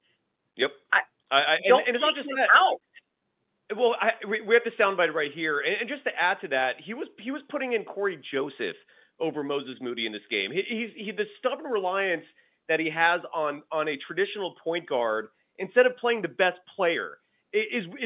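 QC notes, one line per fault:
The speech is carried over G.711 mu-law telephone coding at 8,000 samples a second, so nothing above 4 kHz is present and a faint quantisation noise follows the level of the signal about 38 dB beneath it, and nothing beyond what that format itself imposes can be heard.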